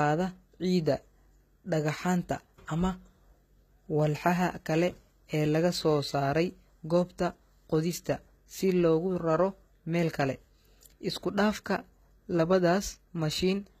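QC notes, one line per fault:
Throughout: HE-AAC compression. Plainly audible coding damage gives the speech a bright but gritty, metallic top end, with nothing above 14.9 kHz. This is likely HE-AAC rebuilding the treble from copied lower bands, at a rate that fits roughly 20 kbps.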